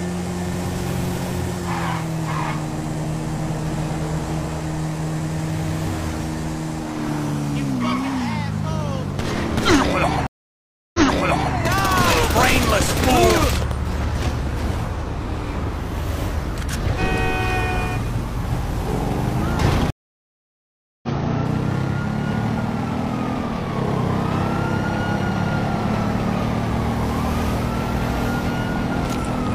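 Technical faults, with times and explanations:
10.27–11.54 s, stream reconnect: the sound drops out for 0.67 s, then comes back 0.60 s earlier than where it stopped, so a short stretch is heard twice, with a soft onset as it returns. The connection broke, the player went quiet, reconnected and started a fresh decoder mid-stream. The server resent a burst of already-played audio, and the first frame out of the new decoder fades in.
12.38–13.72 s, train of clicks: about fifteen sharp, near-identical ticks at a steady 11.3 per second, peaking around 10 dB above the surrounding sound. Such an evenly paced series of same-shaped pulses points to something injecting a spike repeatedly, likely interference from nearby equipment or a faulty connection or power supply.
19.90–21.09 s, stream reconnect: a 1.13 s silence, after which the sound picks up at a point roughly a second further on, so that portion is missing rather than repeated, again easing in as it returns. 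Another dropped connection and decoder restart, this time rejoining the live stream at its current position, skipping whatever passed during the gap.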